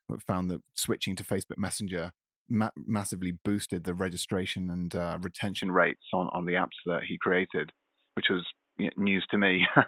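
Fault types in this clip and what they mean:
Input switched to a poorer device: at 5.62 s the speech abruptly goes dull and boxy with nothing above 3.8 kHz, shifts a few dB in level and picks up a faint new background hiss, with no gap at the change, likely the recording hopping to a lesser microphone.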